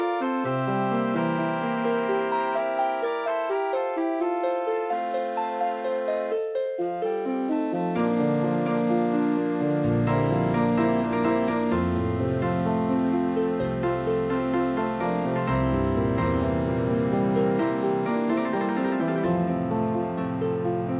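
No technical faults occur at any point, and the audio carries nothing above 4 kHz, as expected from a call path that fits G.711 mu-law at 64 kbps.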